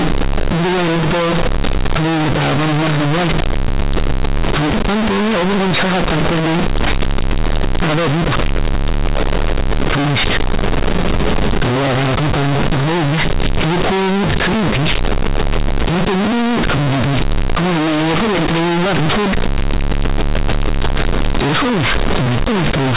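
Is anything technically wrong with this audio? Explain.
Yes. Throughout the speech, companded audio is read as linear: mu-law bytes are played as plain 8-bit samples without expansion, so quiet passages are blown up, giving loud, buzzy distortion and heavy noise in pauses.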